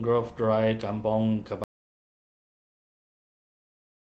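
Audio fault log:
1.64 s to end, audio dropout to silence: the speech cuts off abruptly at 1.64 s and never returns, leaving dead silence with no room tone or background hiss for the rest of the clip. That total absence of any noise floor means the recorder was still running but receiving nothing, most likely because the input device disconnected or the link failed, so it wrote silence. Whatever was said after that point is lost. The light Opus voice coding is heard only in the speech before the cut.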